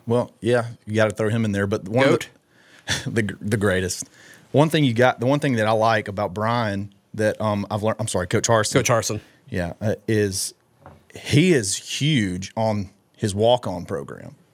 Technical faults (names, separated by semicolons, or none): none